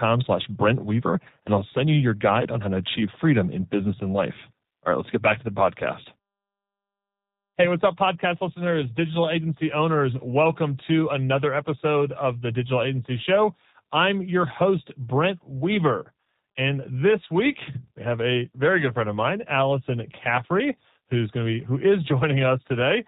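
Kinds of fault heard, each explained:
G.729 codec: Throughout, the speech sounds thin, slightly rough and synthetic, with nothing above 4 kHz. The speech is rebuilt from a vocal tract filter, a pitch predictor and a few pulses per frame, consistent with an 8 kbit/s G.729A stream.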